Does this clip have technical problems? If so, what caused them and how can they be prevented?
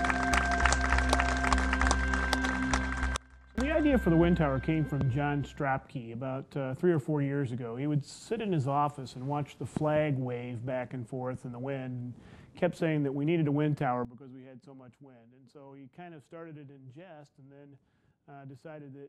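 Yes. Sudden gain jumps occur at 3.16 s, dropping the level by about 23 dB until 3.58 s, and at 14.05 s, dropping it by about 17 dB through the end. The sound and background noise fall together, likely from a gain setting applied instantly rather than ramped. Ramping every gain change over a few milliseconds prevents this.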